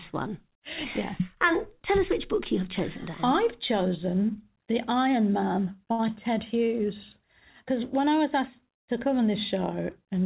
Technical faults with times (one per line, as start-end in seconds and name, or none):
5.92-6.01 short stall from a late packet
6.07-6.09 short concealed packet loss